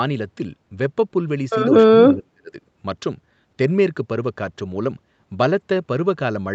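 From 2.09 to 2.56 s the speech sinks by roughly 30 dB. This is likely speech suppressed in double talk. The echo canceller turned down both talkers.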